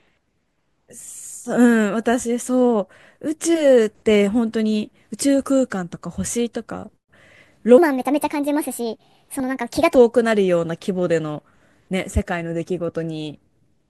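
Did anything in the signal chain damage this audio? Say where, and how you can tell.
Yes. From 7.78 to 9.95 s a section at the wrong speed runs 1.38 times too fast, raising pitch by roughly five semitones and hurrying the speech. That abrupt, simultaneous shift in tempo and pitch points to a likely clock mismatch at the editing or playback stage.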